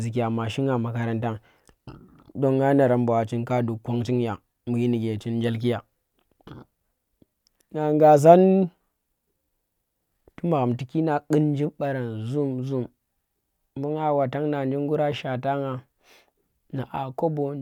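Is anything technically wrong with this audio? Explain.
No, nothing is technically wrong with this audio.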